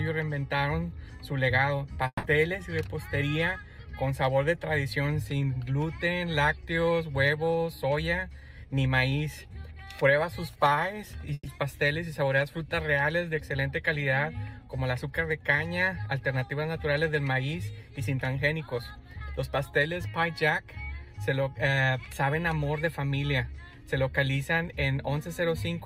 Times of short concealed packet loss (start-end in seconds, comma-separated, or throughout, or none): 1.93-1.97